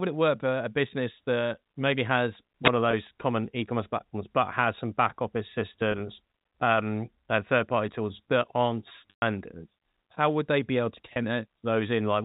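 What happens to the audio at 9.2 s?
Packet loss with pitch repetition spans 9.10 to 9.22 s: 120 ms of speech, fitting about a dozen 10 ms packets, is missing. The receiver loops the last pitch period, giving a held buzz that fades over roughly 50 ms into silence before speech cross-fades back. On a spectrogram, flat, frozen harmonic stripes taper into a blank gap. On the waveform, identical repeating cycles shrink to a flat line.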